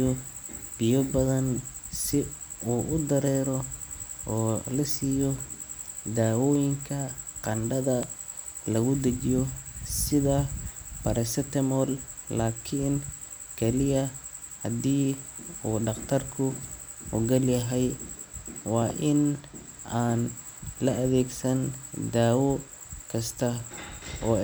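At 8.03 to 8.05 s, just after "daawooyinka qandhada", a single loud pop stands about 10 dB above the speech, and at 18.82 to 18.92 s two pops follow in quick succession. Each is a sharp thump, most likely from a voltage pulse such as static or a switch entering the chain. Unlike a dropout, nothing is removed: the speech carries on underneath.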